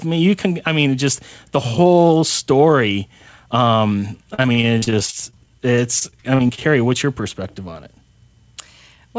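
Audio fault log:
4.34–6.72 s, repeated packet loss (robotic sound): between "the whole story um" and "what's your perspective on", 23 short gaps, the longest 41 ms, are patched by stretching the preceding audio. Roughly a fifth of the span is concealed, giving choppy speech with pieces missing.
8.56–9.05 s, jitter buffer speed-up: the receiver repeatedly drops short pitch-period slices, about 40 ms in total, to shrink excess buffered delay. Speech runs about 7% faster at unchanged pitch, so the closing phrase sounds slightly hurried.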